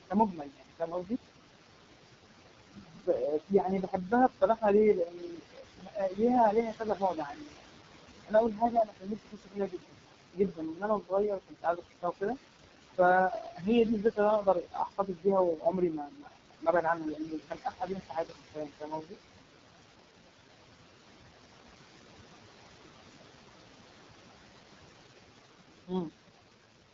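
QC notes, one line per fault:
Throughout, noise suppressor artifacts: the room noise, sitting only about 9 dB under the talker, gets pulled down by about 20 dB in the gaps and swells back under the speech.
Throughout, AMR wideband (HD Voice) codec: heavy codec damage, with a rough, raspy sound that fits the lowest 6.6 kbit/s mode. Nothing above 7.4 kHz, and the very top of the band sounds like shaped noise.
0.10–1.13, 2.65–4.64, 4.95–6.21, 6.52–7.78, 8.26–12.37, 12.97–13.68, 14.00–19.16 and 25.87–26.14 s, speech cut by the noise suppressor: the suppressor mistakes quiet speech for noise and ducks it by up to about 22 dB (about 17 dB at 12.97 s). Endings and soft consonants get swallowed, adding up to roughly three seconds in each of the longest runs.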